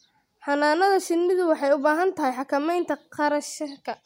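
No technical faults can be heard anywhere in the speech. Nothing in the recording needs a timestamp or a repair.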